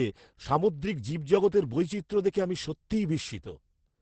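From start to end, the speech carries Opus voice compression damage. Nothing is heard above 8.6 kHz, which fits the SILK coder running at wideband. The damage is heavy. The coder models the voice with linear prediction and spends very few bits on the excitation, which points to a rate near 10 kbps. So the speech sounds muffled and hoarse, with a faintly robotic edge. The coder works in 20 ms frames.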